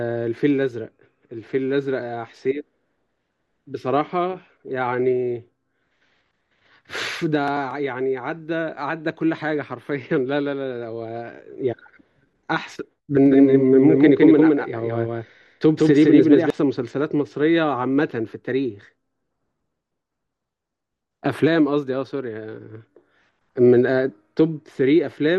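From 13.26 to 16.50 s, a doubled audio track: an equally loud copy lags about 150 ms, likely a second capture path, so waveform shapes repeat, starting and stopping abruptly.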